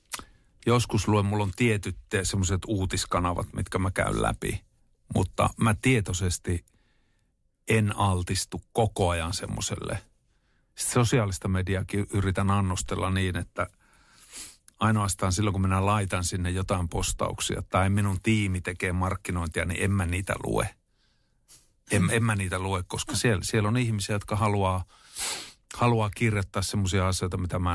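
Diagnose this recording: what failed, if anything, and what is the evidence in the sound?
Nothing in the speech recording points to a failure at any stage, from capture and conversion through processing, transmission and storage to playback.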